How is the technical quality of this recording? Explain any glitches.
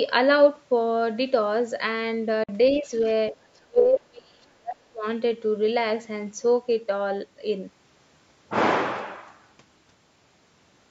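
The recording has a cluster of call-path glitches packed between roughly 2.4 and 5.1 s.

First, a Bluetooth dropout at 2.43 to 2.49 s: the sound just cuts out for about 46 ms and picks up further along, likely a couple of wireless packets missing their deadline.

Then, from 2.76 to 3.1 s, you get the other side's voice leaking through, faint at about 25 dB under the main speech. That's likely loudspeaker echo the canceller didn't fully catch.

Overlapping that is speech suppressed in double talk, likely the echo canceller ducking everything while both sides talk. At 2.80 to 2.91 s the main voice dips by about 10 dB, and at 3.31 to 3.36 s by about 5 dB. From 3.68 to 5.06 s it gets hammered, dropping as much as 30 dB for around a second and a half.

The call microphone processing itself is doing its normal job here, with nothing above 8 kHz and the low bass trimmed.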